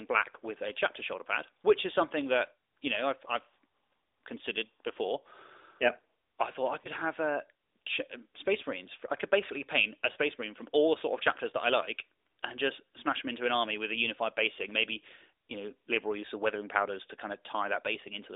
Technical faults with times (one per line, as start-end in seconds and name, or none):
6.82-6.88 lost AMR speech frames
10.12-10.17 lost AMR speech frames